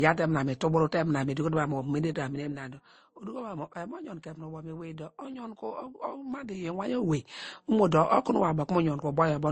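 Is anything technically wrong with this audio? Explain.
Yes. Two faults can be heard.

Throughout the speech there is a blend of smeared, swirly high-end artefacts and a grainier, band-limited texture, with nothing above 19.5 kHz. This points to transcoding between lossy codecs, likely an MP3 stream at around 32 kbit/s re-encoded to Opus at a similar rate. One codec alone would leave a single, consistent artefact character rather than two layered together.

From 1.96 to 3.40 s, zipper noise rides on the speech as the level drops by roughly 15 dB. The gain falls in 2 dB steps at about five per second with no smoothing between them, so each jump leaves a small click and together they sound like a ticking. A properly ramped fade would sound continuous and click-free.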